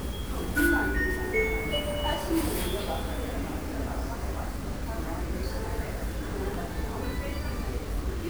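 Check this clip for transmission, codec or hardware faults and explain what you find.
One fault runs through the whole clip: heavy grainy distortion consistent with low bit depth without dither.

From start to end, the sound carries a coarse, gritty texture. The cause is likely that the audio was truncated to very few amplitude steps, which fits 6-bit truncation. With no dither, the rounding error tracks the waveform itself rather than forming steady hiss. The distortion sits only around 20 dB below the sound, so quiet passages turn raspy or sputter toward silence. Unlike dithered noise or a constant noise floor, this grain rises, falls and changes character with the sound. Unlike codec artefacts, it has no swirling or metallic smearing.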